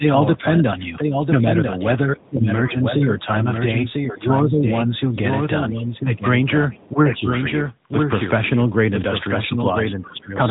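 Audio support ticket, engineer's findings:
Doubled audio track: the whole clip has a dry, full-band copy about 5 dB down, trailing roughly a second behind. Likely a second capture path or a misaligned edit.

AMR narrowband mobile codec: everything is cut above 3.8 kHz, with a plainly buzzy, synthetic edge. That fits AMR-NB in a mid-rate mode, around 10 kbps.

Speech suppressed in double talk: the level dips at 0–1.61 s (shallow, about 5 dB), 2.14–3.48 s (deepest, about 15 dB), 4.07–4.92 s and 5.57–7.32 s (about 10 dB each). Likely the echo canceller ducking the near talker while the far end speaks.

Other side's voice leaking through: faint far-end scraps at 2.16–2.3 s, 6.73–6.89 s and 10.19–10.23 s, about 30–35 dB under the talker. Likely residual loudspeaker echo the canceller missed.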